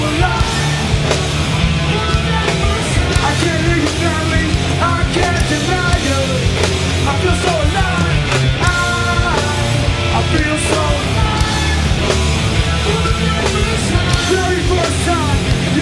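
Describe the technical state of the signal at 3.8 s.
No fault is present at 3.8 s, and the signal is intact at that moment.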